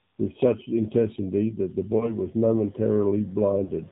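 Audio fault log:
Throughout: AMR narrowband mobile codec, with speech squeezed to 8 kHz sampling and a sparse vocal-tract model at a low rate, which fits about 7.4 kbps. Nothing above 4 kHz survives, and the voice is plainly buzzy and synthetic.
1.98–2.17 s: lost AMR speech frames. A damaged frame, pointing to a single lost one, made the decoder repeat its last settings at falling gain, causing a brief warbling dip before the voice recovers rough.
3.64–3.70 s: lost AMR speech frames again. Two consecutive frames seem lost, so the decoder stretched the previous sound while fading it, leaving a short smeared, weakened stretch.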